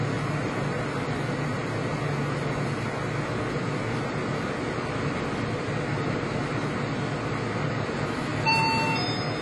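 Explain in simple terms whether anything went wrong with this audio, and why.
Likely AAC compression squeezed the file throughout, discarding everything above 11.5 kHz, so the sound comes out dull and smeared, with a fizzy edge, from start to finish.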